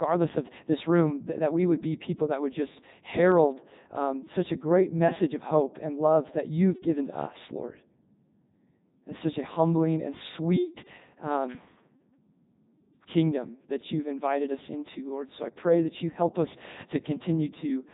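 Throughout, the speech passes through a Codec 2 vocoder and is rebuilt from sine waves. It sounds heavily robotic and buzzy, with nothing above 3.8 kHz.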